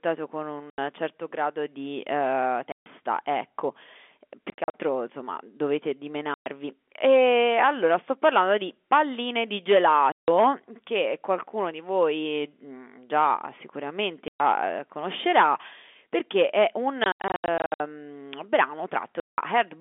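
Packet loss filled with silence chops the speech at 0.7, 2.72 (after "certo grado di eh"), 4.5 to 4.74, 6.34, 10.12, 14.28, 17.04 to 17.8 and 19.2 s. The dropouts run 80 to 420 ms, in steps that fit 20 ms packets. The receiver plays dead air in their place, so each gap has hard edges.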